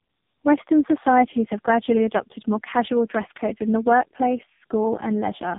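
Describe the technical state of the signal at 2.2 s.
At 2.2 s the speech carries tandem speech coding, present across the whole clip. The sound points to three successive speech coders, ending at a low AMR-NB rate, each re-encoding the last one's degraded output, so it is rough, muffled and warbly, with nothing above 3.8 kHz.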